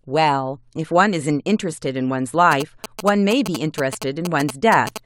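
From 2.52 to 4.98 s, a galloping dit-dit-dit of short 217 Hz buzzes sounds about 10 dB down: GSM signalling bursts from a nearby phone, rectified by the audio circuit.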